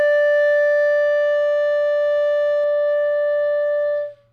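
From 2.64 s to the end, a channel delay (doubling) sets in: one channel runs 42.7 ms late, which fits a 2048-sample buffer, so the mono sum carries an equal-level slap copy. Waveforms show each transient repeated; spectrograms show dense, evenly spaced comb notches.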